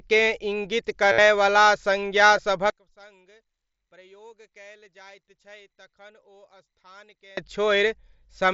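Concealed Bluetooth headset packet loss at 1.12 to 1.18 s: about 60 ms of headset packets went missing, and the receiver looped recent waveform, producing a held buzzy tone with a slight warble as the speech resumes.

One channel inverted from 2.7 to 7.37 s: the speech drops by about 28 dB to a faint residue, likely because one stereo channel's polarity flipped and the shared centre cancelled in the mono sum. The mSBC headset codec limits the speech to 8 kHz, with light graininess on louder sounds.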